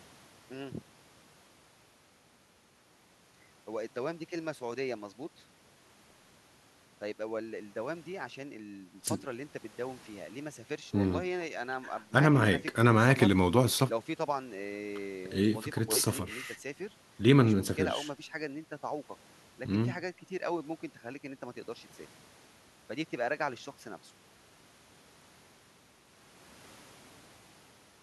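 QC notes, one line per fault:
No faults found in this speech clip. Nothing here needs a QC entry.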